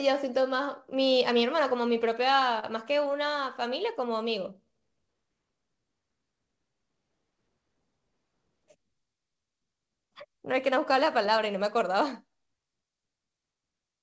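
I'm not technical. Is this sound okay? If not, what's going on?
No. At 2.59 to 2.64 s there is a short stall from a late packet. A piece of the speech arrived late, so the system held the last sound for about 28 ms while it waited, then carried on. Nothing is lost, but that moment sounds briefly stretched.

From 3.95 to 5.15 s there is a jitter buffer slow-down. The system was short of stored audio, so it built up a reserve by repeating tiny slices of sound. The speech plays at about 94% speed, adding roughly 75 ms, and sounds drawn out without any change in pitch.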